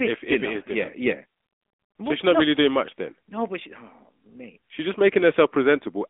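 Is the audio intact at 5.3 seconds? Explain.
No, the AMR narrowband mobile codec runs throughout, so at 5.3 s speech is buzzy and synthetic, consistent with roughly 10 kbps, and band-limited below 3.8 kHz, unlike a plain low-pass.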